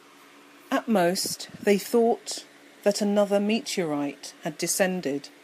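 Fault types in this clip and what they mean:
No technical faults can be heard in this speech recording. There is nothing to list under any fault type.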